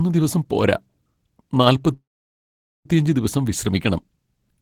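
At 1.93 s the sound stalls into a brief fading buzz, then about 0.83 s of silence, resuming at 2.86 s with "ദിവസം വിശ്രമിക്കണം" intact: a call audio freeze, likely from delayed packets emptying the jitter buffer.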